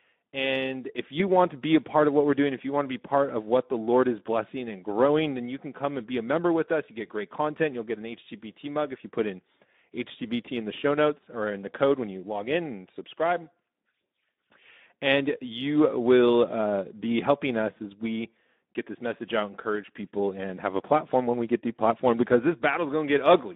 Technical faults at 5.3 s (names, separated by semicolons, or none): Speex codec